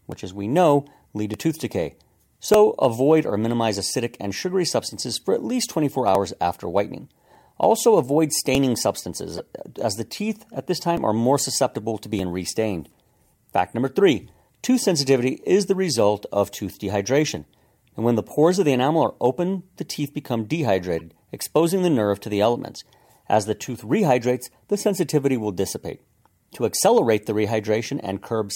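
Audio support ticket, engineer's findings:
Corrupt frame decoded, 9.37–9.40 s and 20.99–21.01 s: short chirp/noise bursts, about -15 dBFS then a fainter about -30 dBFS. Decoder played damaged frames. Misplaced spectral energy, not the silence or smeared repeat of concealed loss.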